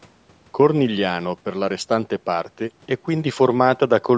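Nothing stood out on listening to this speech; the only thing audible is the normal shaping of call microphone processing, which trims the lowest bass and carries nothing above 8 kHz.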